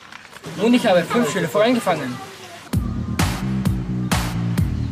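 No technical faults detected.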